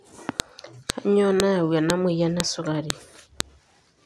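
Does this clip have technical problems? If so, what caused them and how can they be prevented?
Yes: file header played as audio, as sharp clicks at 0.40, 0.90, 1.40, 1.90, 2.40, 2.90 and 3.40 s, every 0.5 s, where speech pieces were joined with their WAV headers intact. Each shows as a narrow waveform spike and a full-height vertical line on a spectrogram. Strip headers before concatenating or streaming.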